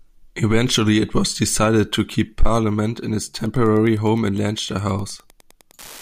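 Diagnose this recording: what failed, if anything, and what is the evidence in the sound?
Wi-Fi interference in the analogue wiring: from 3.38 s to the end, a steady tick repeats every 102.4 ms, about ten per second, roughly 30 dB below the speech. A nearby Wi-Fi radio's beacon bursts are rectified by the audio circuit into audible clicks.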